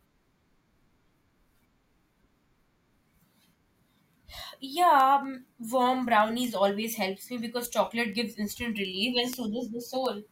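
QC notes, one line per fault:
0.19–10.30 s: word clock ticks, around forty sharp clicks at a steady rate of about five per second across the speech. The receiving device is not locked to the sender's clock, which is off by roughly 100 ppm, so one sample is dropped or repeated at each slip.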